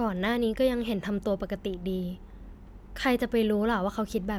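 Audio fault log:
No faults are heard anywhere in this speech recording. There is nothing to enter in the log.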